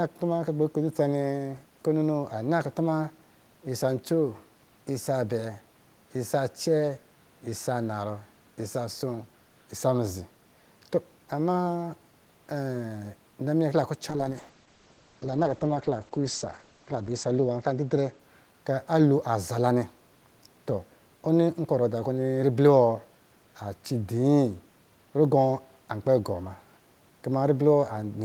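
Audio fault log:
14.1–18.81 s call bitrate drop: the encoder's bitrate was cut when the call's bandwidth estimate fell, consistent with going from about 32 kbps to 9 kbps for about 2.9 s. Coarser coding and a band cut from 20 kHz to 8 kHz make the speech rough, watery and muffled until it recovers.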